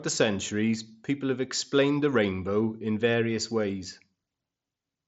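A speech recording with no technical faults to report. It carries the sound of a Bluetooth mSBC headset codec working as intended, with the band stopping at about 7.7 kHz and a faint grain on the louder moments that fits that link.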